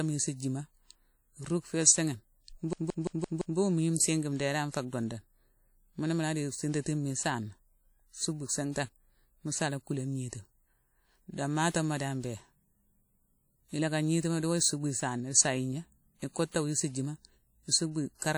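Speech with a ringing, washy quality and a hiss that rises and falls with the signal, plainly audible across the whole clip. This points to likely WMA compression at a low bitrate, around 48 kbps: the transform codec spreads quantisation noise over long blocks and drops weaker spectral detail. From 2.73 to 3.58 s a system hang loop produces a stutter, as one 171 ms piece of audio repeats exactly five times at about 5.86 Hz. The computer or driver froze while the sound hardware kept replaying the same ring buffer, which fits an 8192-sample buffer, and little or nothing of the surrounding audio is lost. At 11.70 to 11.74 s a short hiss of about 48 ms comes before a sharp attack and smears it. This is pre-echo: the attack fell late in a transform block, so noise scaled to the loud part also filled the quiet moment before it.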